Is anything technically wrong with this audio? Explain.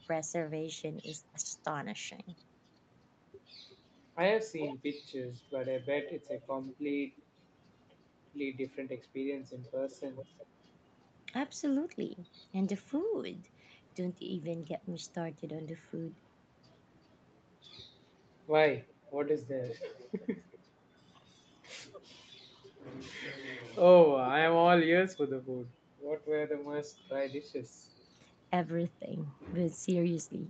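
Yes. Two problems can be heard in this speech.

Speech suppressed in double talk appears from 1.42 to 1.55 s, roughly 150 ms where the level dips by about 10 dB. The likely cause is an echo canceller that, with both ends talking at once, could not tell the near talker from loudspeaker echo and ducked everything. On a waveform the envelope visibly pinches inward; a spectrogram shows the harmonics fading before recovering.

Echo leak recurs seven times: 3.69–4.76 s, 6.06–7.23 s, 9.65–10.46 s, 19.05–20.59 s, 22.1–22.44 s, 23.5–24.31 s and 27.08–28.04 s. A faint repeat of the voice trails it by 359 ms at first, drifting to 394 ms, at about 15 to 20 dB below the speech, and near 40 dB down at 22.1 and 27.08 s. This is likely a loudspeaker on one side of the call whose canceller left residue. A spectrogram shows ghost copies of the harmonic stripes offset in time, and on the waveform small delayed echo bursts appear.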